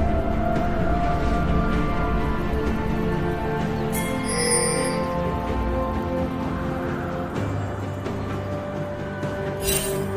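No technical faults can be heard anywhere here.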